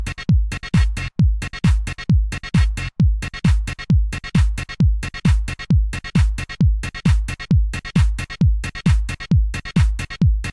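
No technical faults can be heard anywhere in the audio, and the signal stays steady and intact throughout.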